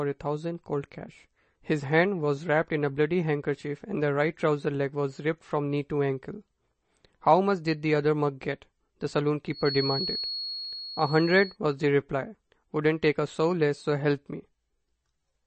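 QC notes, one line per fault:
Throughout: MP3 compression. The speech has a watery, swirling quality and its sibilants turn to metallic chirps, damage that stands out plainly. Nothing is present above 8.3 kHz, and the sound is consistent with a low bitrate around 32 kbps, which likely forces the encoder to drop the treble and switch weak frequency lines on and off. A spectrogram shows a hard ceiling at 8.3 kHz with flickering, patchy holes below it.
9.49–11.58 s: feedback whistle. A thin, steady tone at 4.3 kHz sits behind the speech, roughly 10 dB below it, and swells and fades slowly in level. It likely comes from a loudspeaker-to-microphone loop held just short of runaway, ringing at one frequency. On a spectrogram it appears as a narrow horizontal line at 4.3 kHz spanning about two seconds. The waveform hardly changes because the tone sits well under the speech.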